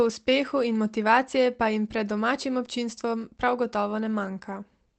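No technical faults are audible.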